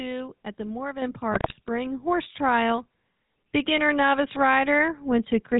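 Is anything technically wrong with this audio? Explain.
Yes. Throughout, the speech carries GSM full-rate codec damage, clearly audible. The codec rebuilds the voice from a vocal-tract filter driven by sparse, regularly spaced pulses, which leaves a buzzy, gravelly roughness consistent with the 13 kbps full-rate coder. A spectrogram shows nothing above 4 kHz and coarse, smeared harmonics.

From 1.32 to 1.57 s, GSM bit errors break in. Corrupted filter, pitch and gain values distort the spectrum and spike the level frame by frame, producing squawks, pops and gargling. This fits about a dozen damaged frames. The waveform shows abrupt amplitude bursts, and the spectrogram shows blotchy, misplaced energy.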